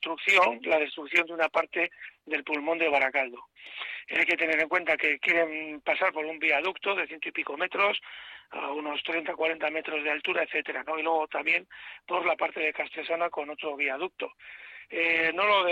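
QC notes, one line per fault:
Nothing stood out on listening, so there is no fault to log.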